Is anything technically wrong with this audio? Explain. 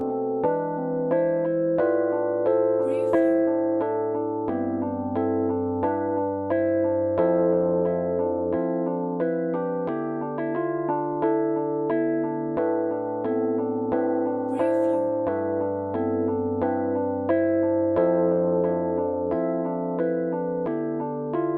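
Yes. Throughout, there is channel delay (comb filtering): one channel lags by around 10 ms, so the mono sum cancels at evenly spaced frequencies from near 40 Hz up, sounding hollow. Unlike flanging, the notches stay fixed.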